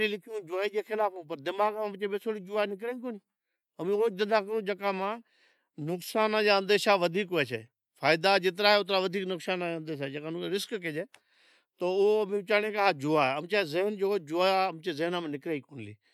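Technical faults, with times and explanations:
No technical faults can be heard in this speech clip.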